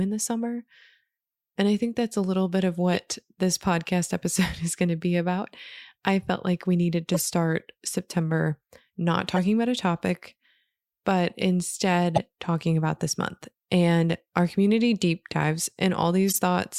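Corrupt frames were decoded in five places, at 2.94–2.98 s, 7.14–7.22 s, 9.36–9.39 s just before "about a topic", 12.15–12.18 s just before "talking about this month", and 16.29–16.38 s just after "our community deep dives". Damaged bits sent energy to wrong frequencies, giving brief chirps and noise bursts, loudest near 12.2 s.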